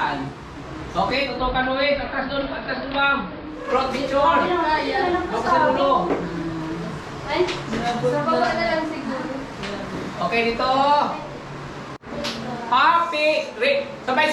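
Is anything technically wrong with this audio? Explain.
Yes. From 1.12 to 3.75 s, digital radio blending to analogue: the receiver loses digital and cross-fades over 314 ms to AM, dropping about 2 dB, adding faint hiss.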